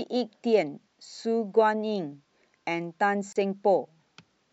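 The clip is speech with one gap at a join of encoded pieces. From 3.33 to 3.36 s the sound drops out for about 32 ms and then resumes exactly where it stopped. The cut's edges are smeared by the codec. The audio was encoded in separate sections and butted together untrimmed. The encoder's start-up delay and the padding in each section's final frame were left in, so this short silence sits at the seam.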